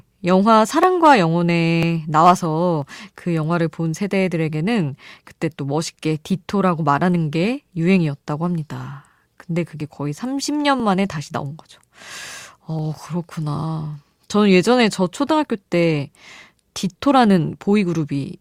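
At 0.83, 1.83, 2.82, 9.81, 10.80 and 12.79 s there's overlap between stream segments: one-second segments overlapping, the trim drops a few milliseconds, and the speech ticks or skips.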